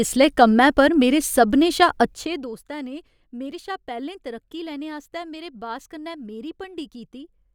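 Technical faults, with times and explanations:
2.03–2.60 s, zipper noise: the speech drops by roughly 15 dB in coarse steps, about a hundred a second, without smoothing. Each jump clicks, giving a buzzy ticking. The waveform envelope shows a staircase, and the spectrogram shows faint evenly spaced vertical broadband lines.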